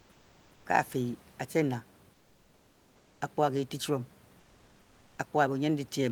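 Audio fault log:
0.00–0.65 s, 2.13–3.21 s and 4.39–5.17 s: comfort noise in place of the background. In each pause the real room noise, which sits about 31 dB below the speech, gives way to a smooth, featureless hiss about 4 dB quieter in the first two gaps and about 2 dB quieter in the third. This is likely Opus DTX: the sender stops transmitting during silence and the receiver synthesises roughly matched noise until speech resumes.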